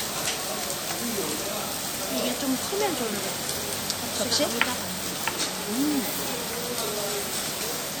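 Throughout the clip, the audio has likely passed through WMA compression at a low bitrate, one that fits roughly 48 kbps. Long transform blocks smear quantisation noise around each event, giving a plainly audible ringing, washy quality and a hiss that breathes with the sound, while content reaches up to about 20.1 kHz.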